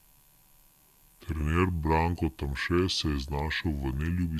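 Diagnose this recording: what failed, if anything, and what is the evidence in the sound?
Throughout, the speech drags slow and sits low, pitched 5.55 semitones down and running at 0.726 times normal speed. This is a wrong sample rate at playback. Pitch and tempo shift by one shared ratio, which fits 44.1 kHz audio played at 32 kHz without conversion.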